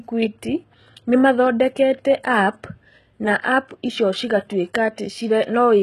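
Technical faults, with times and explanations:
Throughout, HE-AAC compression: the treble sounds bright but synthetic, with s sounds coming out gritty and lispy, and there is no content above about 12.3 kHz. The damage is plainly audible and likely comes from this codec, at a very low rate that fits roughly 16 kbps. Only the lower spectrum is truly coded. The upper bands are patched in from copies of lower ones, so their harmonics fail to line up with the real signal.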